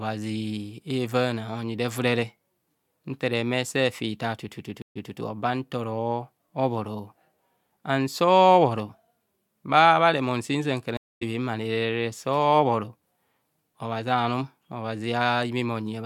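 At 4.82 s and again at 10.97 s the stream reconnects: the connection drops, playback goes silent for 135 ms and then 242 ms, and a fresh decoder fades back in mid-stream. The first resumes 149 ms early, repeating audio before "oba nta oro"; the second skips about 0.2 s ahead.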